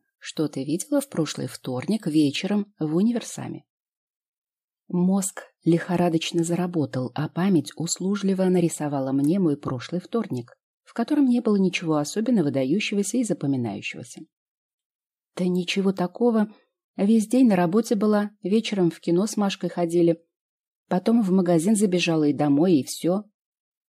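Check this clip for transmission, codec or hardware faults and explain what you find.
One fault is present, at the very start. From 0.0 to 2.36 s, pre-emphasis is left on: the 50 µs FM treble boost is never undone, leaving 10 kHz about 11 dB above 1 kHz, so the sound is thin, bright and sibilant.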